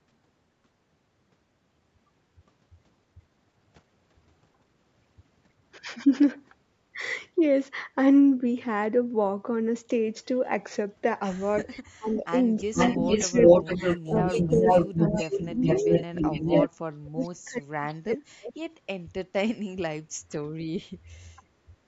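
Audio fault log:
11.62–16.3 s and 16.68–18.7 s, speech suppressed in double talk: The talker's level dips and breaks up in pieces. The first stretch covers about two seconds in total and drops by around 15 dB at its deepest. The second covers about a second and a half and falls by around 40 dB, nearly cutting out. The likely cause is an echo canceller that could not tell the local talker from loudspeaker echo while both sides spoke, so it turned everything down.
12.15–12.2 s and 12.75–16.67 s, echo leak: A delayed copy of the voice comes back. The first is a brief scrap about 327 ms behind and roughly 15 dB below the speech. The second is a long stretch lagging by 434 ms at about the same level as the speech, so it competes directly. One side is likely on a loudspeaker, and its canceller did not remove all of what its microphone picked up, sending the leftover back.
13.90–14.99 s, Bluetooth SBC bit pool drop: For about a second the treble goes dull and a gritty, grainy noise rises over the voice, then clears. 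The sound points to the phone cutting the SBC bit pool on a congested wireless link, a step down that fits a fall from about 28 to 12, or roughly 96 kbps. With so few bits the top sub-bands get little or nothing, and the rest are coarsely quantised, which causes the grit.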